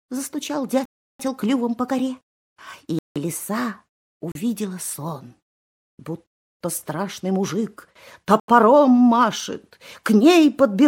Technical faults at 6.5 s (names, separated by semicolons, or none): block of digital silence